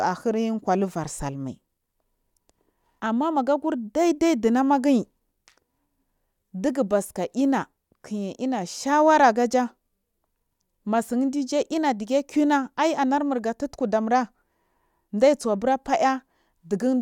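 Nothing here jumps out as a technical fault at any point; the speech just runs along without anything worth flagging.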